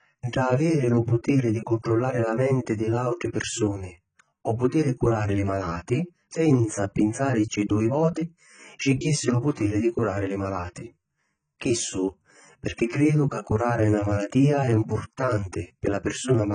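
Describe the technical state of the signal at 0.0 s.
At 0.0 s, as throughout, the speech stops at 9.1 kHz and sounds smeared and warbling, likely AAC compression coarsely quantising the spectrum at a bitrate near 16 kbps.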